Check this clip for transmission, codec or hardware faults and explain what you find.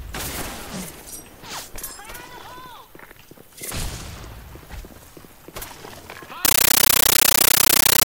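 One transmission fault is present. From 6.45 s to the end at 8.05 s, loud, chattering static replaces the sound, with 13.3 ms noise bursts repeating 31.25 times a second. This is a compressed stream played as audio: an undecoded AC-3 bitstream, apparently 640 kbps Dolby Digital, is read as ordinary samples, each frame heard as noise then zero padding.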